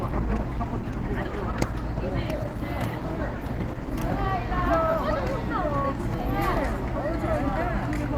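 From 0 to 4.0 s the audio plays from an adaptive stream starting at a low bitrate. The player chose a cheap version to begin fast, then moved up once it had measured the connection. The opening sounds dull. The treble is missing or synthetic, and codec artefacts are strong, which fits Opus at around 16 kbit/s. At 4.0 s the quality jumps with no gap, which fits a step to about 64 kbit/s, and the top extends to 20.1 kHz.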